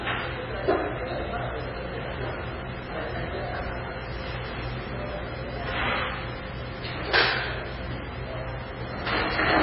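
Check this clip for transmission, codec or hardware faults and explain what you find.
One codec fault runs through the whole clip: likely MP3 compression. Nothing survives above 5.5 kHz, and the remaining band sounds heavily watery and swirly, which points to a very low bitrate around 15 kbps forcing a hard treble cut and frame-to-frame dropout of weak frequency lines.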